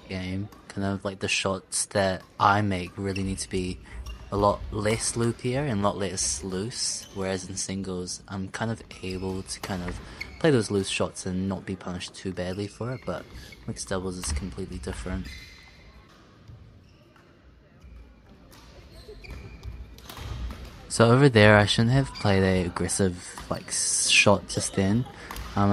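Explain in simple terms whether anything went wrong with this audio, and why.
Nothing went wrong with this recording, so there's no fault to point to anywhere in it. No dropouts, clicks or other glitches turn up at any point.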